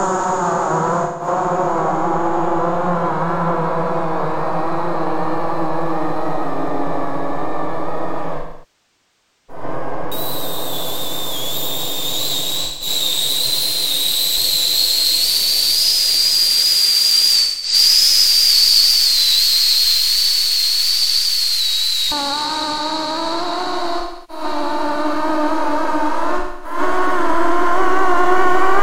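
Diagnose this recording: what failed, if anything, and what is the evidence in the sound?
Codec stage: AAC frame loss with concealment. Short smeared, phasey patches sit at 1.03–1.27, 12.64–12.88, 17.42–17.74, 23.99–24.44 and 26.38–26.78 s, where the decoder recycled the last good spectrum. The long loss, 8.37–9.63 s, decays toward silence before fading back.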